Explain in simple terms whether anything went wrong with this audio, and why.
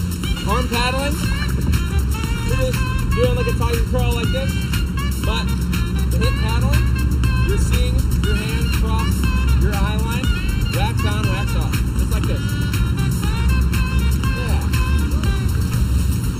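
Something did go wrong, and it lasts the whole clip: channel delay (comb filtering). One channel arrives a fraction of a millisecond later than the other, and when the two are combined into one, parts of the sound cancel each other out. The cancellations fall at evenly spaced pitches, the lowest around 700 Hz, carving fixed gaps into the tone. That is why the audio sounds hollow and phasey from start to finish.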